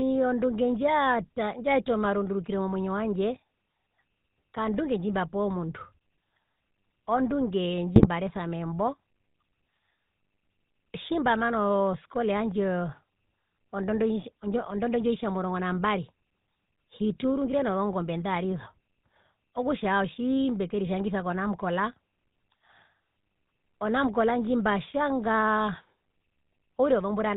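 The whole speech clip carries the sound of the GSM full-rate codec. Voices are rough and buzzy, with a gravelly edge. The top end is gone, and nothing comes through above 4 kHz. That points to the original GSM full-rate coder at around 13 kbps. It models the vocal tract as a filter and drives it with a sparse, regular pulse train. Only a third of the excitation samples survive, so the codec damage is plainly audible.

From 7.96 to 8.07 s come GSM bit errors. The sound breaks into a short squawk and gargle, with a pop in the level. Here corrupted bits reached the decoder. Bad filter, pitch or gain values warped the spectrum and spiked the loudness. The burst lasts about 0.11 s. That fits a run of roughly five 20 ms frames decoded from damaged data before clean frames resume.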